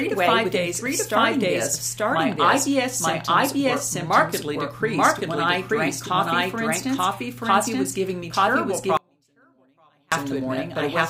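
Throughout, a doubled audio track is heard. A second full-band copy trails about a second behind, about as loud, likely from a slower capture path.

At 8.97 s, an audio dropout to a faint residue begins. For 1.15 s only a faint leak remains, roughly 35 dB down, until 10.12 s. A likely upstream signal loss is the cause.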